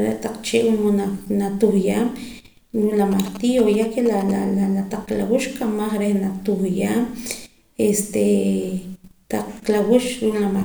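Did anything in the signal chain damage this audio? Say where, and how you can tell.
Yes. From 3.12 to 4.31 s, GSM signalling bursts get into the analogue wiring as a galloping dit-dit-dit of short 217 Hz buzzes, roughly 15 dB below the speech. A nearby 2G phone's radio pulses are being rectified by the analogue circuitry.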